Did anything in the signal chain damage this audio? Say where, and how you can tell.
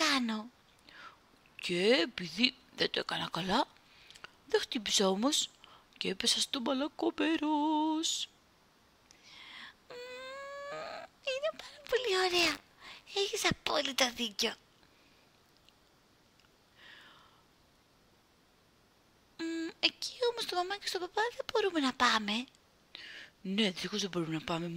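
Yes: a robotic 100 Hz buzz from 12.3 to 13.1 s is buffer tearing at the driver stage, each 10 ms period splicing in a sliver of older audio.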